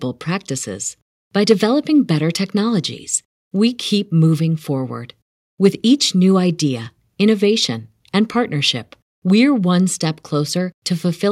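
No technical faults can be heard anywhere in this speech recording.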